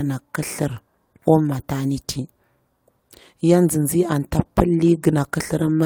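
Speech recording with no technical faults to report.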